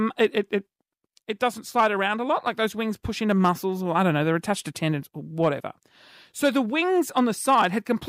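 Hard clipping occurs at 1.43–1.87, 3.30–3.50, 5.43–5.48, 6.44–6.80 and 7.17–7.65 s. Peaks are overdriven by about 3–4 dB and flattened, which adds crackle on the speech peaks.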